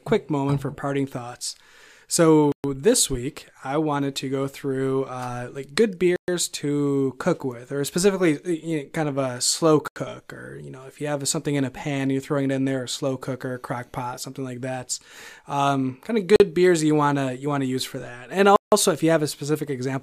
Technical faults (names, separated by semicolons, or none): block of digital silence